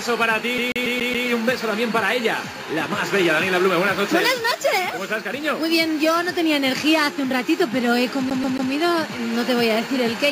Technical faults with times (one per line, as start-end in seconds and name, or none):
0.58-1.28 CD stuck on one turn
8.30-8.72 CD stuck on one turn